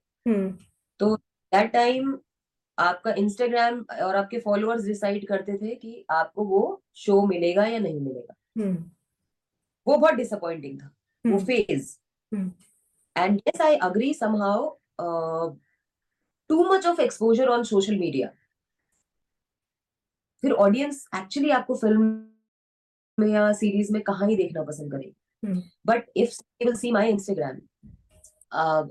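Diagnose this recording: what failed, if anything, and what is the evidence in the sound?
The network stage most likely stalled packet delivery, leaving the receiver's jitter buffer empty: a call audio freeze from 22.04 to 23.19 s. Rather than dropping audio, the receiver stretched the last sound into a decaying fill for about 1.14 s, of which roughly 0.75 s is plain silence. When packets resumed, the audio continued from where it stopped, so nothing is missing but everything after it now runs about 1.14 s later.

A jitter buffer speed-up follows as the late packets arrive together and overfill the buffer. To shed the extra delay, the receiver repeatedly cut out short pitch-period-length pieces, so the audio runs faster without any change in pitch. From 24.09 to 27.99 s it plays at 116% speed, removing around 0.7 s and sounding noticeably hurried. A second burst, from 28.45 to 28.77 s, runs at 121% and trims roughly 70 ms more.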